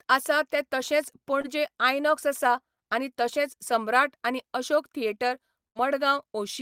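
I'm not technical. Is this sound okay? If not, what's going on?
No. At 1.41 to 1.46 s there is a short concealed packet loss. About 20 ms of the speech never arrived in time. The receiver patched the hole by stretching the sound just before it, so you hear a tiny smear or wobble.

At 5.68 to 5.77 s there is a burst of packet loss. About 80 ms went missing in one go. The receiver held the last sound and let it fade. Then the speech jumps ahead, and that short stretch is lost.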